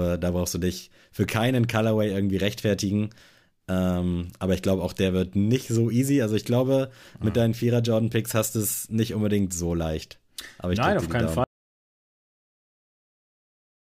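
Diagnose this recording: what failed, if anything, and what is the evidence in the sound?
An audio dropout to silence begins at 11.44 s and runs to the end. The speech cuts off mid-flow. No room tone remains. The input was likely lost upstream, through a disconnected device, failed link or stray mute, while recording continued writing silence.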